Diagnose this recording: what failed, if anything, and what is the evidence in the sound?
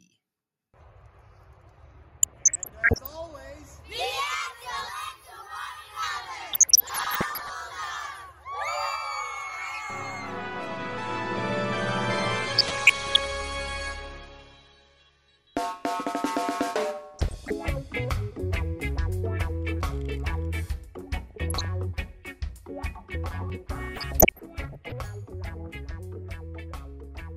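What failed is DAB reception, in the codec stage, and it shows up as DAB burbling in six bursts: 2.18–3.15 s, 6.51–7.50 s, 12.58–13.28 s, 17.14–17.53 s, 21.27–21.65 s and 23.96–24.92 s. Each one gives burbling over the programme. Roughly 0.4 percent to one percent of bits are arriving wrong, enough for some to slip past error correction into the MP2 data. Corrupted samples then put short blips of noise in individual sub-bands, and corrupted scale factors make sub-bands jump in level for up to a frame.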